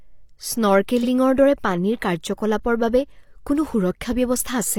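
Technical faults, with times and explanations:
1.00–1.06 s, repeated frames: a 42.7 ms slice plays twice before "দৰে পানীৰ কাৰ্যকলাপৰ বাবে", a stutter that fits one compressed frame sent again, lengthening the audio.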